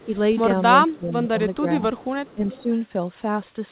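From 0.00 to 0.16 s, a far-end echo canceller likely failed to remove its loudspeaker pickup, so an echo leak returns a faint copy of the speech delayed by 400 ms, about 30 dB below the speech. Within it, from 0.05 to 0.11 s, the speech is likely suppressed in double talk, dipping slightly as the canceller turned down the local talker along with the echo. From 0.86 to 2.01 s, the same confusion likely caused deeper suppression, with drops of roughly 15 dB scattered over about 0.7 s, so the speech pumps and thins in pieces. A brief echo leak at 0.91 to 0.97 s likely comes from that same canceller and is a faint 400 ms copy at about 30 dB down. From 1.95 to 2.63 s, a longer echo leak is likely, a stronger delayed copy about 25 dB below the speech. From 2.35 to 2.70 s, the speech is again likely suppressed in double talk, dipping by roughly 10 dB across about 150 ms.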